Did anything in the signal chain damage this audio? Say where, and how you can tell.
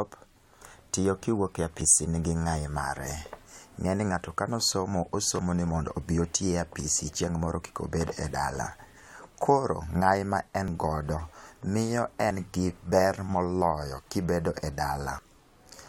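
Yes, there's damage at the driver or buffer stage. The speech skips ahead at 1.81, 5.39, 10.68, 12.31 and 15.19 s. There's no gap of silence, just a jump where something like 50 ms goes missing and the two sides butt together. That pattern points to a likely dropped buffer (overrun): the capture software didn't read each block before the hardware overwrote it.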